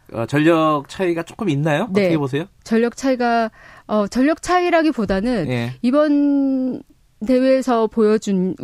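Nothing goes wrong anywhere in this bit of speech, so there's no technical fault to point to at any moment along the way.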